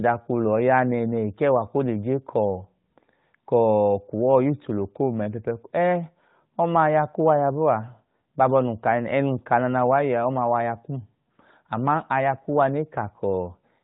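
No technical faults are audible in the speech; the narrowband mobile coding at 12.2 kbps leaves only light codec damage and caps the band at 4 kHz.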